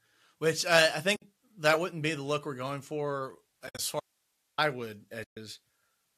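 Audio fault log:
1.16–1.22 s, 3.67–3.79 s, 5.24–5.37 s: AAC frame loss with muting. Decoded frames vanish and come back as silence. The gaps last 60 ms, 90 ms scattered over 120 ms (longest run around 70 ms), and 130 ms. Overlapping windows fade each edge, so the holes sound soft-edged.
4.00–4.58 s: audio dropout to a faint residue. The sound cuts off abruptly for 0.58 s. Only hiss remains, about 50 dB below the signal, so the path after the break stayed live. This is likely a break in the signal feed.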